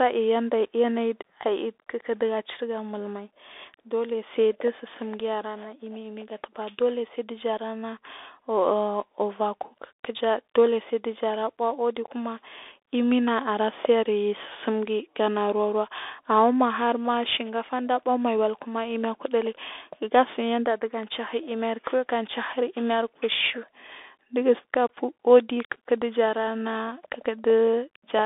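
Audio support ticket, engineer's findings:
Bluetooth CVSD headset codec, whole clip. Speech squeezed into a phone-line band, roughly 300 Hz to 3.6 kHz, nothing up top. S sounds scratchy, gritty hiss riding under everything, louder high bits smear where the one-bit up/down steps can't keep pace. Sounds like the 64 kbit/s headset link, so likely the mic profile kicked in instead of a wideband mode.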